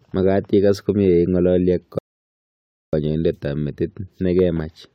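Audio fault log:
1.99–2.93 s, rebuffering stall: the speech stops dead and the line goes silent for about 0.94 s. Then it picks up at exactly the point where it broke off. No syllable is skipped or repeated. The player ran out of downloaded audio and had to wait for more data before it could carry on. So nothing is lost, but the pause stretches the timeline by that same 0.94 s.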